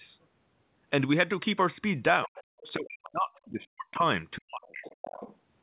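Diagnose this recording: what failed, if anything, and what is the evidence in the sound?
Speech suppressed in double talk, at the call-processing stage. Speech drops by roughly 40 dB at 2.26–2.41, 2.75–4.09 and 4.36–4.84 s. The echo canceller likely ducked both talkers together.

Other side's voice leaking through, also in call processing. A second voice sits about 20–25 dB under the speech at 2.36–2.72, 3.04–3.1 and 4.64–5.36 s. This is likely residual loudspeaker echo.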